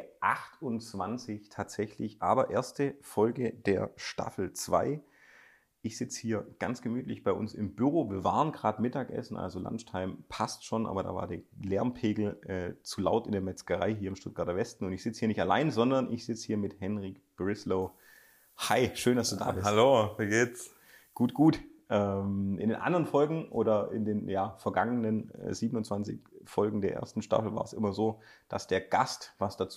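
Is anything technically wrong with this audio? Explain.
Yes. From 17.82 to 21.48 s there is pre-emphasis left on: a treble boost following the FM 75 µs curve went in without the matching de-emphasis cut. That leaves 10 kHz about 14 dB hotter than 1 kHz, so the sound turns thin, glassy-bright and hissy-sibilant.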